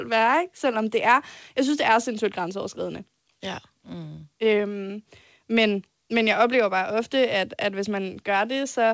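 No technical faults are audible.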